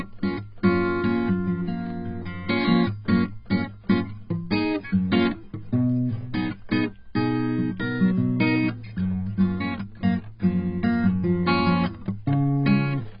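From the first second to the end, the music sounds heavily damaged by AAC compression, likely AAC-LC at a very low rate consistent with about 16 kbps. Nothing is heard above 5 kHz, so the track is dull, and sustained tones warble while the sound is smeared. A plain low-pass filter would only remove the top and leave the rest clean. Here the remaining spectrum is also damaged by the coding.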